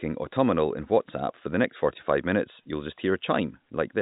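Nothing goes wrong in this bit of telephone speech: it just sounds like ordinary G.711 telephone coding, with nothing heard above about 3.8 kHz.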